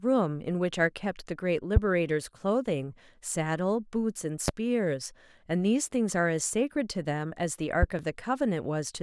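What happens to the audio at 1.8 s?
A loud pop strikes from 1.76 to 1.79 s, a single sharp thump peaking roughly 20 dB above the speech, which carries on underneath. It is likely a sudden voltage step, from a plug, switch, static or driver glitch, added to the signal.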